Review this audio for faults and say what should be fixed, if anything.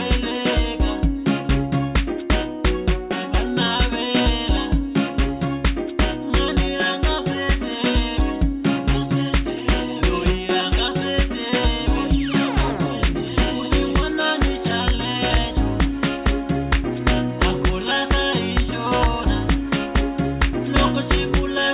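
Nothing in this audio needs to be fixed, as no faults can be heard.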